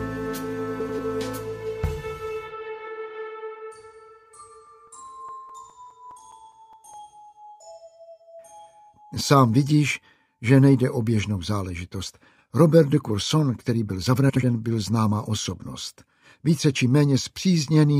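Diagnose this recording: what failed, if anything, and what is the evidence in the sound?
Two things went wrong here, at two different stages. The first is frames out of order, a network or packetised-stream problem. Around 0.80 to 1.00 s, two neighbouring blocks of about 93 ms each play swapped. You get that short garbled flutter. It happens again at 14.29 to 14.44 s with 70 ms halves. Both fit frames of roughly 23 ms arriving out of sequence and being decoded in that order. Nothing goes missing, the audio is just rearranged.

The second is CD scratch ticks, so the fault is at the storage and playback stage. From 4.67 to 7.14 s there are 13 ticks, about five a second, each only a few milliseconds long. That regular spacing is the tell: a scratch passing the pickup once per revolution and wiping out more data than error correction can rebuild. The player then papers over the damaged samples by interpolating or muting them, and that is what you hear as the ticks.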